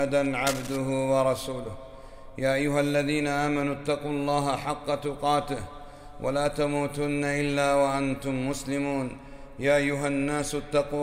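Near the start, from 0.46 to 0.78 s, a short patch of cable scratch noise sits over the sound: a dense, uneven rustling burst roughly 10 dB below the main signal. Its likely cause is a worn cable, connector or control being moved, so that its contact resistance flickers rapidly. Unlike vinyl crackle or digital clicks, which are separate sharp ticks, this is a continuous scraping texture that comes and goes with the movement.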